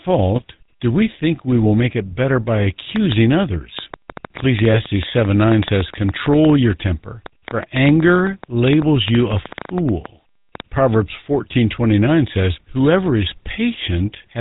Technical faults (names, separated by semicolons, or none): GSM full-rate codec; GSM bit errors